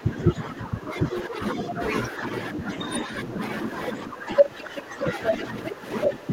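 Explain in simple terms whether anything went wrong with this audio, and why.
Yes, two things went wrong. Speech suppressed in double talk runs through the whole clip, 0 to 6.32 s: the voice repeatedly sinks noticeably for about four seconds in total, likely because an echo canceller turned everything down while both sides talked. The other side's voice leaking through appears as brief scraps at 5.25, 5.65 and 6.03 s, sometimes louder than the speaker. These are most likely leftover loudspeaker echo that wasn't removed, and they sound like a second person rather than noise.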